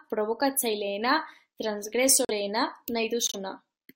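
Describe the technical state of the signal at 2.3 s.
At 2.3 s the speech drops into a corrupt frame muted gap from 2.25 to 2.31 s, about 60 ms, which fits two rejected frames. The decoder discarded damaged compressed frames and silence replaced them, so the waveform flatlines abruptly and the spectrogram shows a blank vertical band spanning every frequency.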